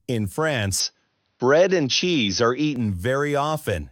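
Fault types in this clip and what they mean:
Input switched to a poorer device: from 0.8 to 2.76 s the sound turns duller with nothing above 6.2 kHz, shifts in level by a few decibels and gains a faint new noise floor, likely from a device change. Unlike a plain filter, tone, level and noise all change together.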